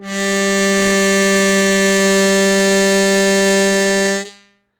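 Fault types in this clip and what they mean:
Opus compression: throughout, the music's tones turn plainly rough and grainy as bit-starved bands get noise fill, likely from Opus music mode near 24 kbps.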